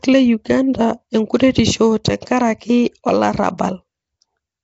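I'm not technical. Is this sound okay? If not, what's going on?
No. The speech has most likely been squeezed through Nellymoser compression, the old Flash microphone codec, which chops sound into tiny blocks and gives each only a small, fixed share of detail. Weaker frequency ranges get no detail at all and are filled in with noise. Throughout the clip the speech has a rough, hissy halo and a smeared, underwater quality, and everything above about 7.7 kHz is gone, so it sounds dull as well as damaged.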